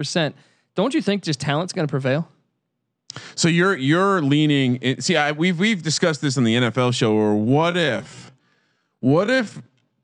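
From 7.03 s to the end of the clip, the speech suddenly drags to roughly two-thirds of its normal pace while its pitch stays where it was. This is a time-stretched section, slowed to 0.645 times its original speed. The likely cause is software lengthening the passage by repeating short slices of audio to hold the pitch.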